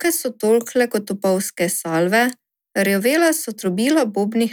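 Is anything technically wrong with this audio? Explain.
No, nothing technically wrong stood out on listening to this speech recording.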